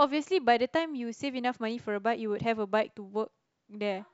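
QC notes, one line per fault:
No faults heard anywhere in the clip; nothing to log.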